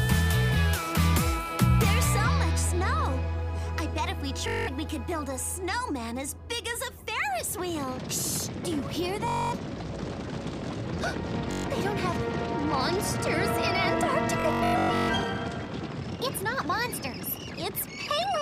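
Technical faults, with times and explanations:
4.48 to 15.10 s, Bluetooth stutter: dropouts at 4.48, 9.28, 11.52 and 14.40 s lose about 192, 235, 128 and 469 ms. The last is scattered over 683 ms. Late or missing packets make the receiver replay its last short buffer slice, and the audio resumes further on.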